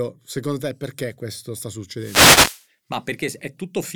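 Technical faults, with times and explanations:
1.94–2.67 s, wireless microphone noise hit: just after "te perché questo sta", the speech is hit for about three-quarters of a second by a swish of static before clearing. This is the analogue FM radio link fading as reflected copies of the signal arrive out of phase and cancel at the receiver antenna. With the carrier weakened, receiver noise rises.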